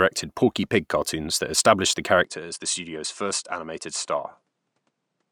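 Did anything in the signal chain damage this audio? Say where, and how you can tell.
Yes. From 2.25 s to the end of the speech the sound narrows abruptly, with nothing above 10.4 kHz. The level drops by roughly 5 dB, and a new, faint noise floor sits far below the signal. There is no gap at the transition. This points to the capture stage, most likely an input switched to a poorer device mid-recording. A different microphone or headset path would bring its own narrower band, tone, gain and background noise.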